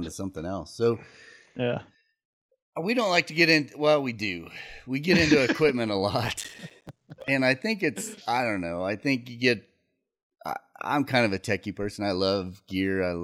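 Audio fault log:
6.25–7.28 s, processor overload crackle: right after "equipment a", a burst of gritty, tearing crackle rides over the speech for about a second and stops before "and I think it's". The processing could not finish its short audio blocks on time, and deadline after deadline slipped. Each miss dropped in a hard-edged gap of silence. The spacing of the clicks points to blocks of roughly 5 ms, with a few dozen missed across the stretch.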